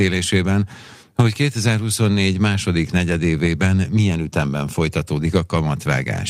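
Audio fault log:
No faults are present in this speech recording. Nothing in the audio calls for an entry in this log.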